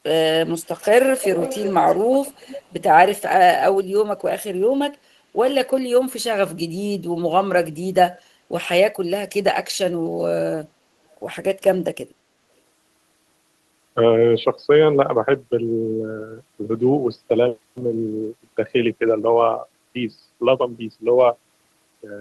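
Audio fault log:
0.59–0.85 s, 1.07–2.81 s and 8.14–8.21 s, echo leak: a copy of the speech returns 362 ms late. It is very faint in the first and last spans and fairly strong across 1.07–2.81 s. It likely comes from a far-end loudspeaker whose echo canceller let some pickup through. On a spectrogram it shows as faint, time-shifted repeats of the speech harmonics; on the waveform, as low-level energy filling the pauses.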